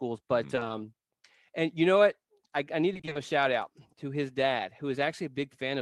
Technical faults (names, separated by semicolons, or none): repeated packet loss (robotic sound)